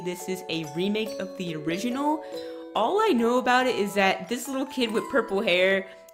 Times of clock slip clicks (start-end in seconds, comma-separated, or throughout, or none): 0.12-6.13